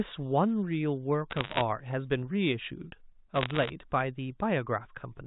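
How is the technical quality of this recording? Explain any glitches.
Two short bursts of crackle stand out, from 1.30 to 1.61 s and again from 3.36 to 3.70 s, and both are bit errors on a digital phone line. The sound comes through a G.711 mu-law telephone path, so it tops out below 4 kHz. During each burst, bits get flipped in the data stream, roughly one in a hundred in the first and a little fewer in the second. Each flip corrupts a single sample, and when it hits the sign or a high-order bit you get a sharp tick. Packed together, those ticks turn into a gritty crackle laid over the speech, while the speech itself carries on unchanged underneath.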